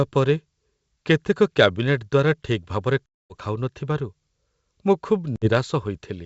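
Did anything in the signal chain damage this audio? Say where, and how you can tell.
Yes: packet loss on an ADPCM call, in the network. Hard-edged silences at 3.06–3.33 s and 5.36–5.49 s end in brief distortion while the decoder's predictor resynchronises.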